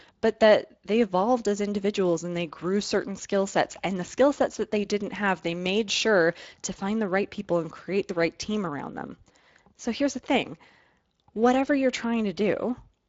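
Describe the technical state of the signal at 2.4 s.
At 2.4 s the speech carries Speex codec damage, present throughout. Starved CELP excitation makes it plainly noisy and hoarse, which points to roughly a 20 kbps stream.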